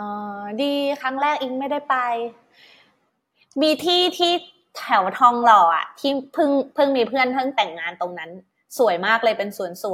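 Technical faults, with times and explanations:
Nothing stood out on listening; no technical fault could be heard anywhere in the recording.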